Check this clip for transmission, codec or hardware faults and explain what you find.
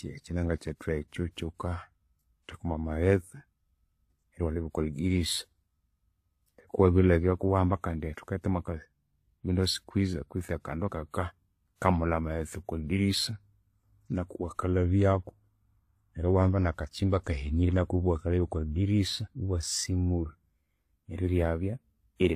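There's one problem, and it runs through the whole speech clip: transcoding between lossy codecs. Nothing reaches above 14.9 kHz. The smeary, swirly texture of a very low-rate first encode, which fits HE-AAC at around 20 kbit/s, sits under a second layer, likely a WMA re-encode at around 96 kbit/s. The second codec can't restore what the first discarded, so it spends bits on those artefacts and adds its own.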